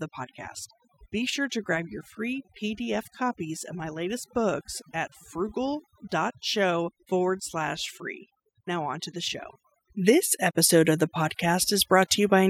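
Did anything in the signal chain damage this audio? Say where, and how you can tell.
Yes: throughout, the speech sits over a near-silent, twinkling background, the mark of overdone noise removal gating bands near its noise estimate.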